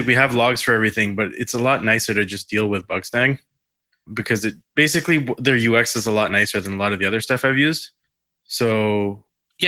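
From start to finish the speech sounds slightly hoarse and faintly robotic, with a grainy, smeared quality and a thin, rough top end. This is Opus voice compression at a rate low enough for the damage to be plainly audible, which fits roughly 16 kbps in 20 ms frames. The codec keeps the full band but splits it: a linear-prediction coder handles the range below 8 kHz with a coarsely coded excitation, and a thinly coded transform layer covers everything above.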